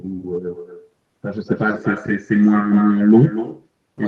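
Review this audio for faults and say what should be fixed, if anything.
Echo with no canceller runs through the whole clip. Each phrase comes back about a fifth of a second later as a copy about 13 dB quieter and thinner, because the far end's loudspeaker feeds its own microphone and nothing subtracts it. Room reverberation decays smoothly out of the sound itself, but this echo is a distinct, delayed repeat. To prevent it, enable acoustic echo cancellation on the far-end device, or have that participant wear headphones.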